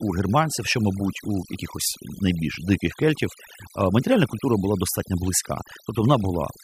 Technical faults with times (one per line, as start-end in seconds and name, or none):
0.00-6.63 overdone noise removal